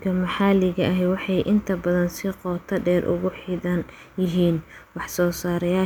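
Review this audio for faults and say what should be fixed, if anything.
Nothing in this speech recording calls for a fix. No faults can be heard anywhere in it, so there is nothing to prevent.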